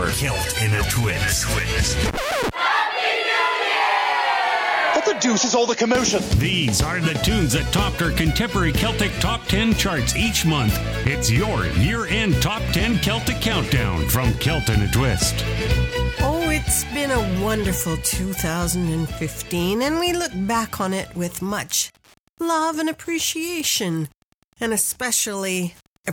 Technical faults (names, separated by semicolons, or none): Wi-Fi interference